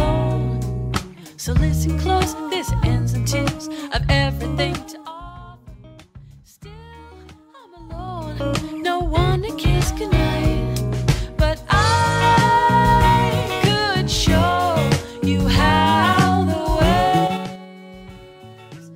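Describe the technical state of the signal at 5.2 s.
Zipper noise, 4.55 to 5.39 s: the level drops roughly 20 dB in 2 dB jumps about ten times a second, each jump ticking audibly, unlike a smooth fade.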